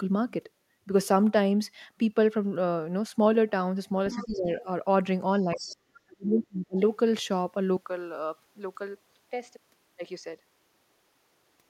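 From 4.11 to 4.26 s, and again from 5.56 to 5.76 s, the other side's voice leaks through as a faint second voice, well below the talker. This is likely loudspeaker echo the echo canceller failed to remove. Over the same stretches the talker's speech is suppressed in double talk, from 4.14 to 4.67 s and from 5.43 to 6.8 s. The canceller likely could not separate the two voices, so it turned the talker down too. The first dip is moderate. The second is far deeper and nearly cuts the speech out, for about a second in total. At 7.77 s the input switches to a poorer device, likely another microphone, and stays there to the end. There is no gap at the switch. The sound turns duller and narrower. It gets a few decibels quieter and picks up a faint new background noise.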